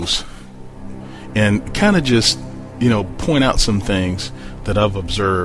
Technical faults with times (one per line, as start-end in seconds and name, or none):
none